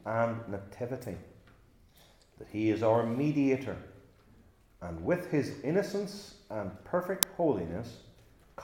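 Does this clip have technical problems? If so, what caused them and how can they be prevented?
Yes. At 7.23 s there is an uninitialised buffer: the playback path sent out a block of memory before any audio had been written into it, so whatever stale data sat there was read as samples. The result is a loud, harsh crack lasting about 2.7 ms, which fits a 128-sample block. Prevention: zero-fill or pre-write every buffer before it is queued for playback, and output silence whenever fresh audio is not ready.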